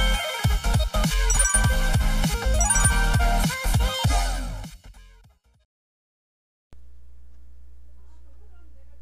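From the start to about 1.5 s there's sample clock jitter: the converter's timing wobbles by around a microsecond or two, so samples land slightly off. That error tracks the waveform's steepness, giving a roughness roughly 30 dB under the sound that swells on loud, bright passages.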